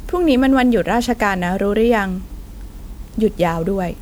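A speech clip whose whole length carries generation loss: the speech sounds swirly, smeared and hollow, with consonant attacks blurred into their surroundings. The likely cause is repeated lossy re-encoding, with the texture fitting MP3 at 128 kbit/s passed through about seven times, each pass requantising on a shifted frame grid so noise and spectral gaps pile up. What separates it from a single low-bitrate encode is that the damage is heavier than 128 kbit/s alone would leave.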